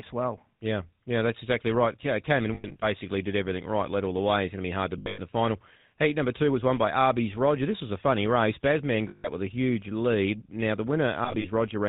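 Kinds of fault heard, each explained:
GSM full-rate codec: the whole speech clip is band-limited to 4 kHz with a buzzy, gravelly pulse-driven roughness; spectrograms show nothing above 4 kHz.
Lost GSM frames: around 2.54, 4.98, 9.08 and 11.24 s, dropouts are concealed by repeating the last good frame, giving a metallic ring, visible as smeared horizontal bands.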